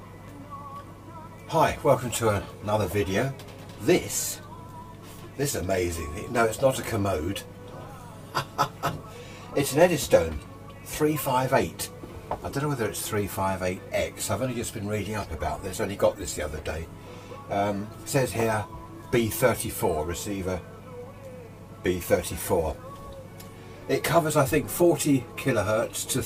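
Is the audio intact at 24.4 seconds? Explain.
Yes, the audio is intact at 24.4 seconds, with no audible fault at that moment.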